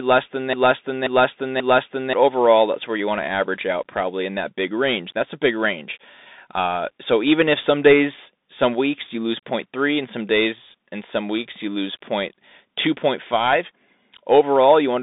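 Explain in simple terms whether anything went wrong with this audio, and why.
A broken-record loop runs from the very start of the clip to about 2.13 s. It is already under way when the audio begins: a stretch of about 0.53 s plays, then plays again exactly, three times back to back. The likely cause is a player or stream that stalled and kept resending the last bit of sound it still had. Whatever speech should have filled those two seconds is lost, not just delayed.

The Bluetooth CVSD headset codec shapes the whole clip. This is the basic phone-quality system many Bluetooth headsets use for calls. Instead of recording the sound's level directly, it sends a stream of single up-or-down steps and adjusts how big each step is as it goes. Only sound between roughly 200 Hz and 3.7 kHz gets through, and nothing above about 3.8 kHz survives, so the speech sounds thin and muffled. The damage is plainly audible: s sounds come out scratchy, loud bright moments distort, and a grainy hiss sits under the voice.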